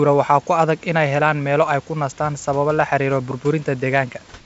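From 4.34 to 4.45 s, the background turns steady and featureless, about 3 dB different in level. This is comfort noise in place of the background, likely from discontinuous transmission.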